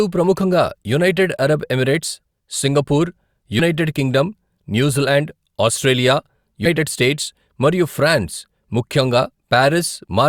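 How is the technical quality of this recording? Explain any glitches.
The speech has two brief glitches from compressed frames skipped. At 3.59–3.61 s and 6.65–6.68 s, roughly 70 ms and 100 ms of audio vanish, jumping ahead in 20 ms frame steps.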